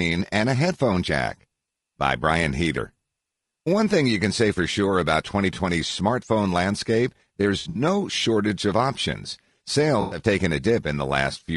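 A speech recording that was likely passed through low-delay AAC compression (AAC-ELD, as used in video calling) at a low rate; the roughness fits about 32 kbps. The short frames resolve the voice's harmonics poorly, so the speech sounds plainly grainy throughout, with noise filling between harmonics and a thin, synthetic-sounding top band. AAC frame loss with concealment then strikes twice. From 7.59 to 7.81 s, 120 ms of audio went missing in gaps scattered over 160 ms, the longest run about 70 ms. From 10.01 to 10.19 s, another 100 ms was lost. The decoder rebuilt each gap from the last good spectrum, leaving smeared, noisy, phasey patches instead of clean sound.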